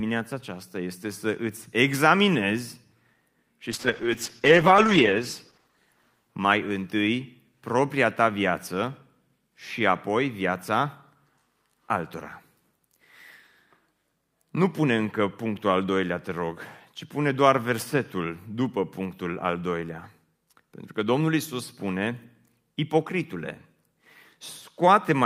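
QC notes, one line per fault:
3.73–7.15 s, call bitrate drop: the encoder falls from 48 to 9 kbps, bottoming out for about 1.35 s, so the speech turns rough and muffled. A spectrogram shows the upper band vanishing, then returning.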